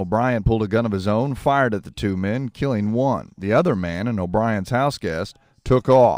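Speech, with imaging from linear upsampling running through the whole recording. The content stops near 12 kHz, and a faint mirror image of it fills 12 to 24 kHz, roughly 40 dB below the speech. That pattern fits a 24 kHz source raised to 48 kHz by straight-line interpolation. The top end sounds dulled, with a light metallic shimmer on sibilants. Unlike aliasing, which folds tones down into the band, these images sit above it and mirror the speech.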